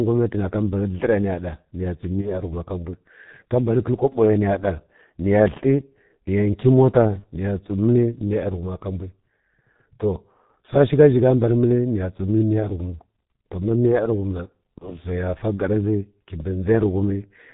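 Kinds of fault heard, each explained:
G.723.1 codec: the whole clip runs through this old low-rate telephony codec at 6.3 kbit/s. Nothing above 4 kHz survives, and the slow 30 ms frame updates leave the speech muffled and hoarse, with consonants smeared into each other. The codec damage is heavy.
VoIP packet loss concealed by the speech codec: there are three short dropouts, at about 2.21, 7.19 and 14.78 s. Each one is a single lost 30 ms frame that the decoder papers over by extending its last pitch and filter. The speech stays weak or distorted until about 2.31, 7.25 and 14.91 s.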